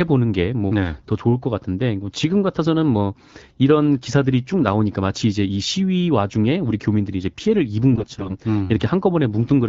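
Speech clip with a burst of AMR bit errors from 7.92 to 8.35 s, where the sound turns hoarse and gargly as roughly a fifth of the less-protected bits arrive flipped, over light AMR-WB coding that points to 12.65 kbit/s.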